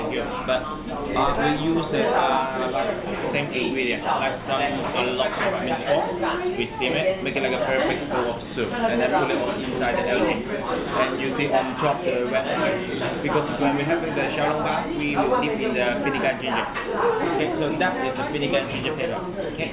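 No technical faults are audible.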